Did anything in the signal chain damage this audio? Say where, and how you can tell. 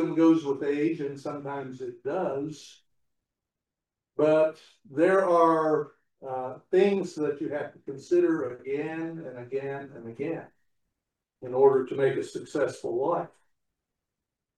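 No, nothing in the signal chain damaged this audio, and no stage shows any audible sign of trouble.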